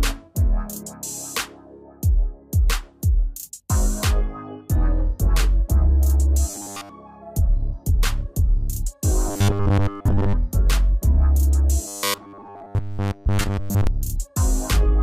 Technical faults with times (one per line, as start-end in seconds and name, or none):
6.50-6.89 robotic sound from repeated short buffers
9.28-10.33 robotic sound from repeated short buffers
11.88-13.87 robotic sound from repeated short buffers